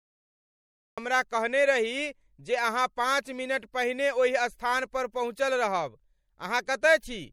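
Cut-off start at 0.98 s: the audio sits in digital silence, then begins mid-sound just before "हमरा कहने रही जे", with no natural attack, because recording began late. MP3 compression throughout: plainly audible watery, swirly smearing as weak frequency lines switch on and off between frames, likely from an encoder short of bits, which fits about 64 kbps.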